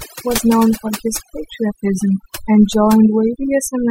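Overdone noise removal runs throughout this speech clip. A noise reducer set too strong keeps pulling individual frequency bands down or out wherever they sit near its noise estimate, so the background drops and breaks up into twinkling specks, and the voice loses its quieter detail.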